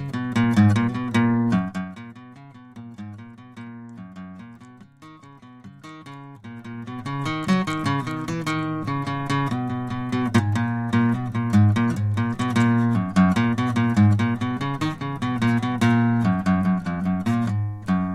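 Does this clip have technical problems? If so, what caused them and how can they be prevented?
Yes. Zipper noise occurs from 1.54 to 1.94 s, as the music drops about 20 dB in 2 dB jumps at roughly 30 per second, and from 6.4 to 7.26 s, rising about 20 dB at about 15 steps per second. Unlike stray clicks, this ticking lasts only while the level moves, and each unsmoothed step adds a click. Interpolating gain per sample prevents it.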